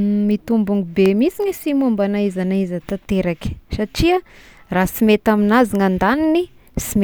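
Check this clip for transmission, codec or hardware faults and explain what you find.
One fault is audible in this speech recording, a brief dropout.

A block of digital silence occurs at 1.06 s. For about 0.29 ms the signal is replaced by silence, most likely because the output buffer was not filled in time. The waveform drops out and returns with no fade. At this length there is no audible hole, only a tick or dip.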